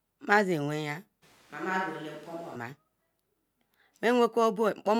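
Speech, with a switch to a distant microphone from 1.24 to 2.55 s: the sound abruptly turns roomy and hollow, loses bass, drops about 5 dB, and room noise rises, likely because the close microphone dropped out. Its sudden start and end distinguish it from gradual movement away from the microphone.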